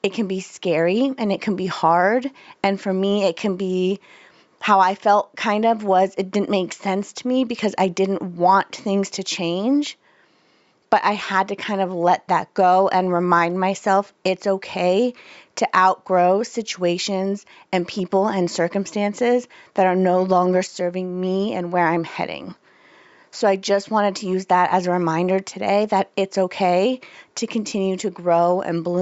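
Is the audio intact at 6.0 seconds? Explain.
Yes, at 6.0 seconds the speech is intact, with only the room's own background noise sitting about 51 dB below it.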